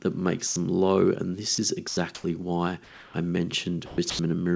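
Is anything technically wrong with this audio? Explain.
Yes. Sound dropped by the voice detector appears at 0.47–0.56 s (just before "them low"), 1.55–1.58 s, 1.88–1.97 s (just before "why I"), 3.86–3.98 s and 4.10–4.19 s. Each gap lasts 30–120 ms. Speech energy is likely misjudged as background and replaced by flat noise. On the waveform, speech collapses abruptly to a low, even band, and the spectrogram shows a smooth, structureless patch.

Comfort noise in place of the background occurs at 2.15–2.24 s (before "why I") and 2.84–3.14 s. The real background is likely swapped for synthetic noise from discontinuous transmission. It is about 5 dB louder in the first patch and about 3 dB quieter in the second. It looks like uniform grey texture without the background's fine detail. Throughout, the spectrogram is empty above 8 kHz, consistent with the call codec's bandwidth.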